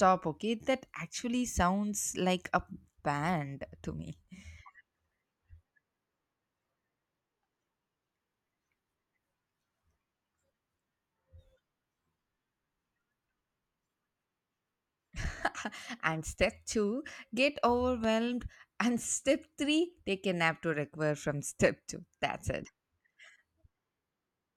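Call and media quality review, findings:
Loud pop at 18.04–18.07 s, a single sharp click sitting a few dB above the speech, which carries on underneath. Likely a voltage spike from a plug, switch, static discharge or driver glitch getting into the chain and shaped into a brief pulse.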